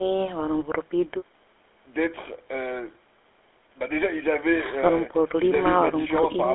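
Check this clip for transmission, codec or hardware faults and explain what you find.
One codec fault runs through the whole recording: the speech has passed through the GSM full-rate codec, and the damage is plainly audible. The codec models the vocal tract as a filter and drives it with a pulse excitation in which only every third sample is kept. That coarse excitation gives the voice a buzzy, gravelly roughness. The sound sits in a narrow line band of roughly 300 Hz to 3.5 kHz, which fits a 13 kbps GSM channel. The call's microphone high-pass is separate and not a fault.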